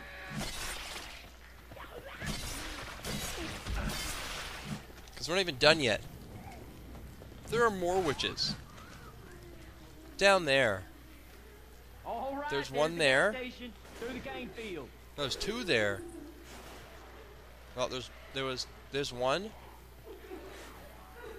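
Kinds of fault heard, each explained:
Repeated buffer: Around 1.26 s there's a tiny glitch where the playback ran dry and the device just played its last chunk of sound again, twice more, before fresh audio turned up. Each piece is only about 1.45 ms long, which fits a 64-sample buffer. So you don't hear a stutter so much as a quick click or brief buzz from the hard joins. Essentially nothing gets skipped afterwards.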